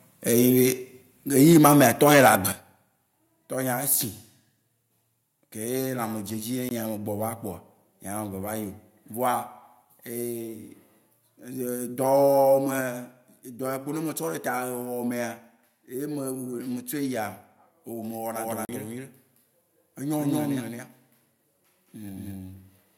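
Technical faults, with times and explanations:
1.02, 1.53, 2.52 and 12.81 s, microphone volume stepped down: the whole signal, speech and background alike, drops abruptly by about 3, 2, 8 and 4 dB. This is likely the call software cutting input gain. On the waveform the envelope shows a sudden, lasting step down.
1.36 to 2.35 s, microphone overload: loud syllables gain a harsh, crackly edge, driven about 9 dB past the converter's limit, with roughly 3% of samples flattened. The input was likely set too hot. The waveform shows squared-off peaks, and the spectrogram shows broadband smearing.
6.69 to 6.71 s and 18.65 to 18.69 s, block of digital silence: the sound cuts to nothing for 20 ms, then 40 ms, and returns without a fade. A spectrogram shows a blank vertical gap flanked by thin full-height lines.
18.36 s to the end, doubled audio track: a second full-band copy, about as loud as the original, trails it by around 200 ms. 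This is likely a duplicate capture path. The result is a dry, slapback doubling with no room tail. The spectrogram shows every feature repeated at a fixed offset.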